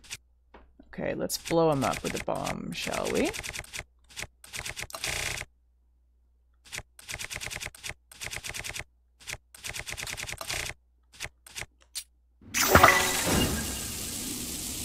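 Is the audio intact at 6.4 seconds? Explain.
Yes, the audio at 6.4 seconds is intact, with no dropout, click, distortion or other fault at that moment.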